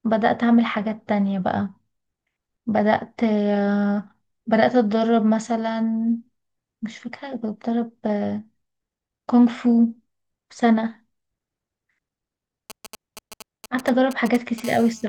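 From 12.70 to 14.60 s, GSM signalling bursts from a nearby 2G phone break in as galloping ticks and short 217 Hz buzzes, rectified by the audio circuit, intermittent rather than continuous. From 14.64 to 15.04 s the phone enters a call and this becomes a steady GSM phone buzz: a raspy, harmonic-rich 217 Hz tone at about -21 dB relative to the speech, unbroken instead of stuttering.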